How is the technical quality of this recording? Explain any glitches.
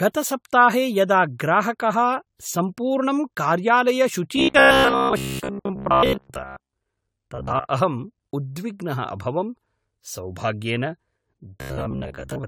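The speech here has two problems, one constant and one that comes and goes.

Throughout, it sounds swirly and hollow, with smeared attacks, likely generation loss from about ten passes through AAC-LC at 96 kbit/s.

From 4.36 to 6.76 s, 7.35 to 7.65 s (just before "अहं उद्विग्नः"), and 11.61 to 12.47 s, there's robotic sound from repeated short buffers. It's a rigid metallic buzz at 66.8 Hz, which fits roughly 15 ms chunks being replayed for most of the audio, likely because fresh audio was arriving too slowly.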